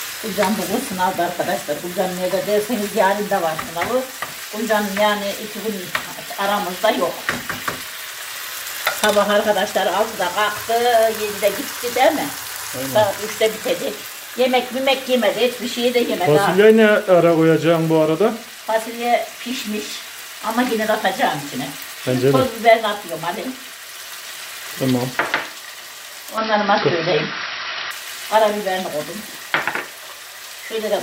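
An input switched to a poorer device from 26.38 to 27.91 s: the audio abruptly dulls with nothing above 5.7 kHz, a level shift of about 5 dB and faint new background noise, likely a change of microphone.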